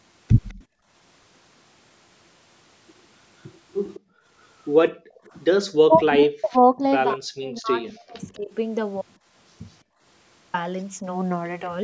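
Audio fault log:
0.49–0.65 s and 3.94–4.00 s, echo leak: a faint copy of the speech returns 206 ms late, roughly 35 and 25 dB down, likely residual loudspeaker echo. Unlike gating, something is added rather than removed.
0.66–0.89 s, 4.00–4.28 s, 4.92–5.28 s and 9.84–10.02 s, background gated by the echo canceller: the room sound dips by about 25, 36, 40 and 24 dB for 0.2–0.3 s, then recovers. Only the background drops, not the talker.
5.87–6.82 s and 7.15–8.51 s, speech suppressed in double talk: the talker's own speech dips by up to about 40 dB, in pieces totalling about 0.7 s and 1 s. This is likely suppression while both sides talked, and it removes speech rather than room sound.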